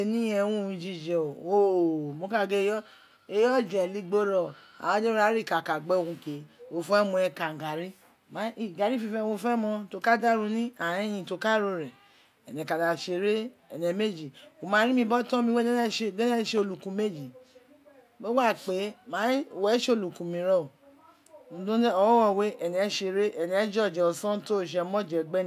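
No technical faults can be heard in the clip, so there are none to describe in time order.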